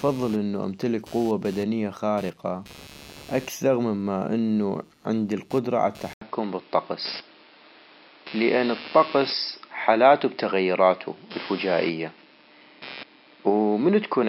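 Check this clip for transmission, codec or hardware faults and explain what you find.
Two faults are present in this speech clip.

Computer activity noise runs throughout. Load changes in the computer disturb the audio circuit's shared ground, adding a buzz that pulses about 150 times a second. It sits about 25 dB below the speech and follows the machine's activity, not the talking.

An input switch to a poorer device begins at 6.13 s, just after "مما انو عندي القدرة", and lasts to the end. The likely cause is the system changing to another microphone or a headset's call profile. An 80 ms silence marks the switch. Afterwards nothing is heard above 5.4 kHz, so the speech turns dull and boxy. The level shifts by about 5 dB, and a new noise floor sits roughly 35 dB below the speech.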